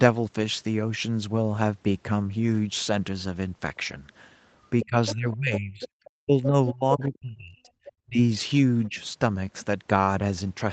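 From 4.8 to 5.14 s a second voice sits about 10 dB under the talker. It is the other side's voice leaking through, likely from loudspeaker echo the canceller missed. It returns from 5.8 to 7.18 s at about 15 dB down, then as brief scraps at 7.85 s and 8.84 s, far quieter still. Unlike suppression, it adds sound rather than removing it.

Overlapping this, from 4.86 to 8.19 s, the talker's own speech dips sharply, by around 35 dB at worst and for about two seconds in total. This is speech suppressed in double talk, likely the canceller ducking everything while both sides spoke. A milder dip of about 10 dB follows at 8.88 to 8.98 s.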